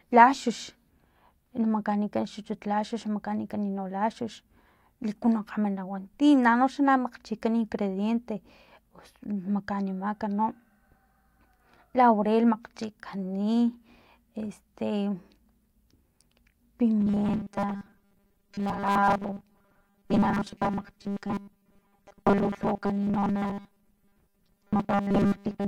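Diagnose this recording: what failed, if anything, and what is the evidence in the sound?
From 17.01 s to 25.68 s the speech turns into a rigid, metallic buzz pinned at 200 Hz, still loosely tracking the words. This is robotic sound from repeated short buffers, likely a driver or buffer underrun looping a 5 ms block for most of that stretch while real audio is skipped.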